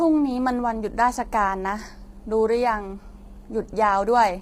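Speech sounds rough and grainy throughout, with noise between the harmonics and a synthetic top band, likely from heavy low-delay AAC compression at a bitrate fitting about 24 kbps.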